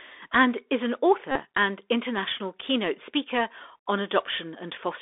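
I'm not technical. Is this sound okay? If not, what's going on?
No. The whole clip goes through the Bluetooth CVSD headset codec, the old phone-quality headset format: everything sounds thin and muffled, with scratchy s sounds and a grainy hiss underneath.

From 1.31 to 1.39 s, between "and is an" and "and international keynote speaker", there's a Bluetooth headset packet repeated fault: lost bits of sound were filled by replaying the last good packet over and over, making a short buzz.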